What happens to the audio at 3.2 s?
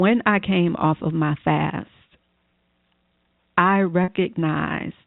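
Nothing goes wrong at 3.2 s: the speech carries on intact through that moment, with the telephone-band sound of the G.711 line behaving as it does throughout.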